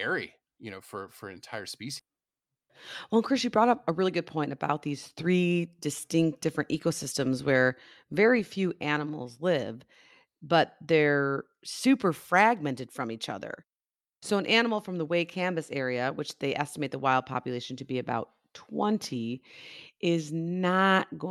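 A speech clip whose receiver dropped audio and then rushed to shed delay. At 1.99 s, right after "know for for entire", a skip ahead occurs: a stretch of audio was dropped while later audio was already queued, and nothing was filled in. Playback jumps forward by around seven tenths of a second, joining both sides of the cut almost seamlessly, so part of the utterance simply vanishes with no audible gap. After this, the jitter buffer was still holding more audio than its target and began speeding up, trimming tiny pitch-period-length slices over and over. From 2.09 to 2.68 s the speech runs about 11% fast, shedding roughly 70 ms. From 3.14 to 6.09 s, ending just before "different ecosystems where very", it runs about 8% fast and loses around a fifth of a second. Pitch stays put in both stretches, but the delivery sounds noticeably hurried.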